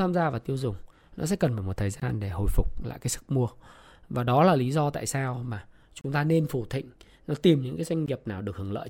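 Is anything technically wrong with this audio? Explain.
Yes, there are gaps between stream segments at 2.00 to 2.02 s, after "cần phải một thời"; 6.01 to 6.04 s, after "do tại sao mà"; and 8.06 s, after "nó tìm những cái". These are hard-edged silences of 16 to 32 ms, falling at roughly 2 s segment boundaries. Unlike a dropout, nothing is missing: the audio simply resumes late.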